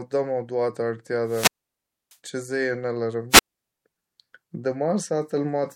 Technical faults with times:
1.24-2.17 wireless microphone squelch dropout
3.30-3.61 wireless microphone squelch dropout

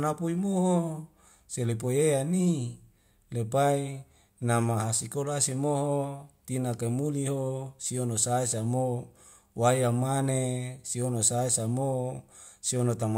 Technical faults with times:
none

